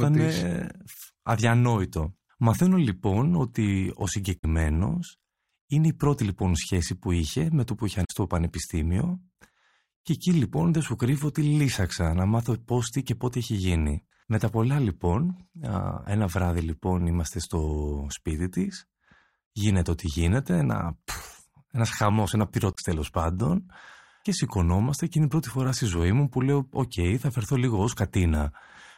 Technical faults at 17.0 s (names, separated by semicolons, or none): none